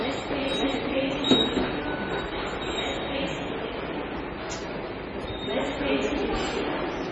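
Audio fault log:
Throughout, MP3 compression: the sound is dull and watery, with nothing above 9.8 kHz and a swirling, metallic flutter in the upper range as faint detail flickers in and out. The likely cause is heavy MP3 encoding at a bitrate that fits about 24 kbps. With so few bits, the encoder cuts all treble above a fixed point and drops weaker frequency components, which then come and go from one frame to the next.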